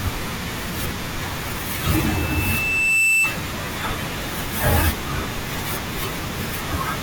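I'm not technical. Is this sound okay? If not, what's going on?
No. A loudspeaker feedback squeal runs from 1.74 to 3.44 s: the microphone picks up its own speaker, and a 2.6 kHz tone swells over about a second and a half into a piercing whistle above the speech.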